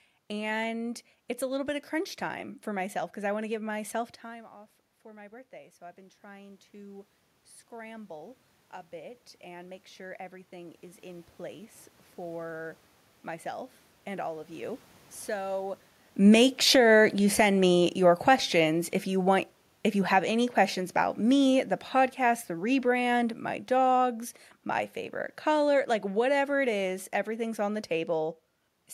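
Speech in which automatic gain rising occurs twice: after the input dropped about 18 dB as the talker moved back near 4 s, the control slowly added about 5 dB from 4.22 to 7.14 s (after "want to give myself", up to "scramble a"), then about 7 dB more from 8.96 to 13.53 s (ending before "and all of"), so voice and room noise swell together. Automatic gain falling follows a second talker movement around 16 s: the control cut about 11 dB from 16.11 to 24.23 s, so the voice and its background sink together before "my favorite color like".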